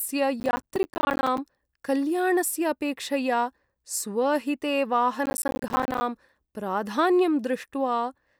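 Processor overload crackle appears twice, from 0.40 to 1.38 s and again from 5.26 to 6.01 s. In both stretches the processor falls behind and misses dozens of buffer deadlines in quick succession, with the spacing suggesting buffers of around 10 ms. Each miss drops in a hard-edged sliver of silence, so the speech is chopped by a rapid stream of tiny gaps, heard as a gritty, tearing crackle that stops as soon as the load eases.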